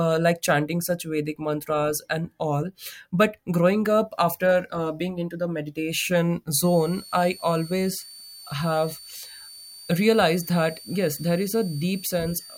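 It's a speech recording, and from 6.58 s right through to the end at 12.57 s there's a switching supply whistle riding underneath it. A thin high tone sits roughly 20 dB below the speech, wandering between about 4.39 and 4.60 kHz. That drifting pitch is the giveaway: a switch-mode power supply dropping into an audible burst mode or beating against another supply, shifting frequency as its load changes.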